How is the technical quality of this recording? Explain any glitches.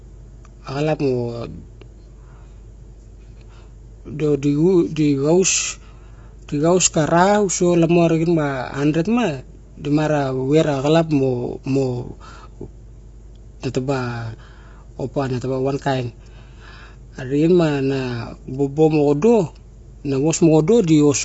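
The recording has one technical problem, present from start to finish.

Low-delay AAC compression, throughout the whole clip: the damage is likely from AAC-ELD, the low-delay codec used in video calls. Its very short frames resolve the harmonics of a voice poorly, and at the low bitrate the sound points to, around 24 kbps, the bits run short. The speech is plainly rough and grainy, and nothing survives above 7.7 kHz, which leaves the top end dull.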